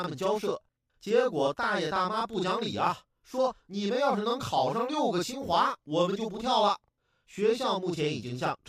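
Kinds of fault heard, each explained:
Channel delay (doubling): one channel reaches the mono sum 40 ms after the other, so every syllable of the speech is followed by an equally loud copy, heard throughout as a slapped doubling. A delay this long separates into a distinct repeat, unlike the hollow comb-filter colouring of a short offset or a decaying room reverb tail.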